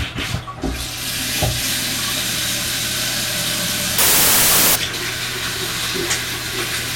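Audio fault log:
3.98–4.76 s, wrong sample width: a burst of loud, harsh noise with the underlying sound faintly audible inside it, slowed and lowered in pitch to about 0.75 times normal speed. This fits 32-bit integer samples being read as packed 24-bit ones. Half the three-byte groups straddle sample boundaries, so most values are assembled from mismatched bytes and turn to noise. The 4:3 byte ratio yields extra samples, stretching the passage and dropping its pitch.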